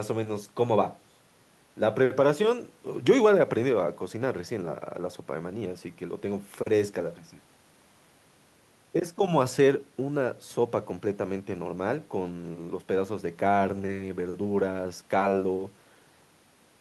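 No technical faults occur at any point in this speech, so there are none to describe in time order.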